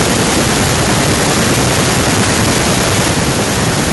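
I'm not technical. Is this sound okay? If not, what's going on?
No. Throughout the speech there is a harsh, crackly edge on the loudest syllables, with about a tenth of the sound flattened at the top. This is microphone overload, likely from the microphone's input volume set too high, so the peaks slam into the recording limit.

There are also two sudden small drops in loudness, at 0.02 s and again at 3.11 s, where the voice and background both get quieter at once. That is the microphone volume being stepped down, likely by the call software reacting to the overly loud input.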